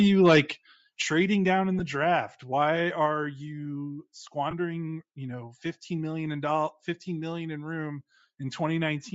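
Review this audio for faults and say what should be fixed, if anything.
Bluetooth LC3 compression runs through the whole clip and is plainly audible: the upper band sounds grainy and breathy, likely from LC3 coding at a rate that fits about 32 kbps with 10 ms frames, where sparse upper spectrum is filled with noise. Unlike clipping, this texture is constant rather than tied to loud peaks. Use a higher LC3 bitrate or a wired or higher-quality link.

Microphone overload appears from 0.25 to 0.40 s, where the loudest part of the speech runs about 7 dB past the converter's limit and roughly one sample in twenty has its top flattened. The cause is likely input gain set too high. It is told apart from codec grain by being confined to that peak and having a crackling, squared-off edge. Lower the microphone input volume before recording.

The microphone volume is stepped down at 1.02 s, just before "down in", by about 7 dB, and again at 3.06 s by about 3 dB. 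Voice and background drop together in a single step rather than fading, which points to an automatic gain adjustment, likely triggered by the earlier overload. Disable automatic input-volume control in the call software.

Lost LE Audio frames occur from 1.79 to 1.81 s, right after "down in", lasting 10 ms, which fits one lost frame, and from 4.51 to 4.53 s, lasting 20 ms, which fits two. The decoder repeats the last spectrum with random phase, so the sound smears into noise instead of dropping to silence or clicking. Improve the Bluetooth link by reducing distance and interference.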